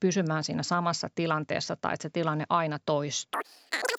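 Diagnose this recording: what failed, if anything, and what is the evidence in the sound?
The playback stage ran at the wrong sample rate for the last part of the clip. From 3.34 s to the end, right after "että se tilanne aina", the speech suddenly runs about 2.76 times too fast and jumps up about 17.6 semitones. This fits 16 kHz audio being played out at 44.1 kHz with no conversion. Speed and pitch rise together by that single ratio, giving the squeaky, rushed sound.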